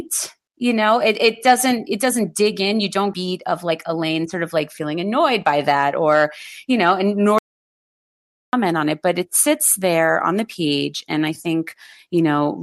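A skip ahead at 3.13 to 3.15 s, right after "dig in you don't", drops about 0.4 s of speech, and the two sides of the jump are joined with no gap. From 3.23 to 6.15 s, jitter buffer speed-up trims short pitch-period slices to shed the backlog, running speech at 106% with unchanged pitch and removing about a fifth of a second. An audio dropout to silence from 7.39 to 8.53 s, just before "on it but it", leaves 1.15 s of digital silence with no room tone, likely from a lost input or a stray mute.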